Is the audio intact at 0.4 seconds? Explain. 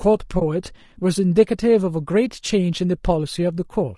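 No. From 0.39 to 0.42 s an AAC frame loss with muting occurs. The decoder zeroed the spectrum for a missing stretch of about 20 ms, which fits one lost frame. The overlapping windows fade the sound out and back in, leaving a brief dip.

At that moment, as throughout, the sound is plainly rough and grainy, with noise filling the gaps between harmonics and a lowered or synthetic-sounding top band. This is likely low-delay AAC compression (AAC-ELD), whose short frames resolve pitch harmonics poorly, and the degree of damage fits a bitrate around 32 kbps.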